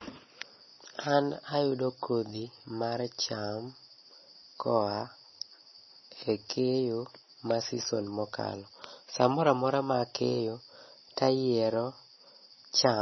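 Speech clip, likely passed through MP3 compression at a very low bitrate, which fits something near 24 kbps. Throughout, the encoder has cut everything above 5.9 kHz, dulling the top end, and weak frequency lines flicker between frames, leaving the sound watery, swirly and chirpy.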